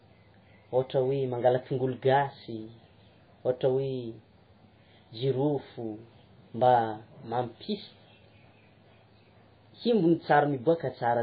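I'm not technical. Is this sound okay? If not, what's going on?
No. From start to finish the speech sounds muffled and dull, as if heard through a wall, with a watery, swirling quality and a metallic edge on s sounds. This is heavy MP3 compression, likely from saving the file at a very low quality setting. To save space, the encoder discarded everything above about 5 kHz, which removes the crispness, and threw away quieter detail that flickers in and out, causing the swirl.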